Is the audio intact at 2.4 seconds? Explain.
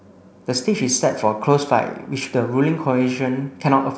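Yes, at 2.4 seconds the speech is intact, carried by G.722 wideband telephone coding at 64 kbit/s with no fault there.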